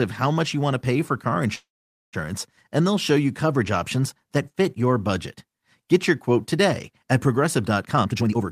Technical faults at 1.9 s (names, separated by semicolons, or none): call audio freeze